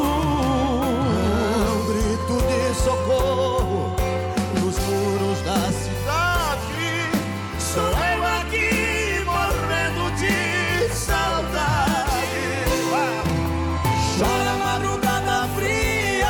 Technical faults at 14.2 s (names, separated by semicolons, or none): none